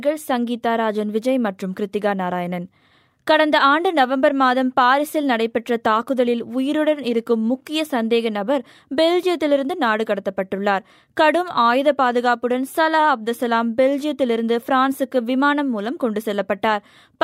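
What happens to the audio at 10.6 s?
Nothing goes wrong at 10.6 s; the audio plays through that moment intact, with no dropout, click, distortion or other fault to be heard.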